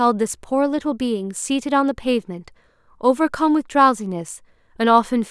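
No technical faults can be heard anywhere in this speech recording.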